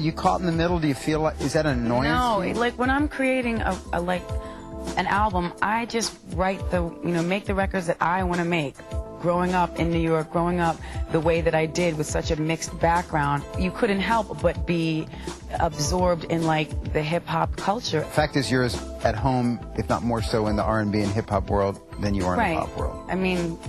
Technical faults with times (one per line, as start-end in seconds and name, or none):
none